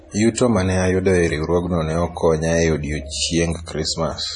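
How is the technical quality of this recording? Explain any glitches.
The quality is fairly rough, with a single fault running through the whole speech clip. From start to finish, nothing comes through above about 10.5 kHz, and the sound is watery and swirly, with metallic chirps on the s sounds and smeared consonant attacks. That's likely heavy MP3 compression, and the damage points to a starved bitrate, around 32 kbps. The encoder chops off the treble at a fixed point and drops quiet frequency lines, which flicker on and off frame to frame.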